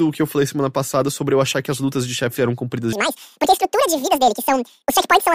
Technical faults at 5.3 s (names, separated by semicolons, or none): section at the wrong speed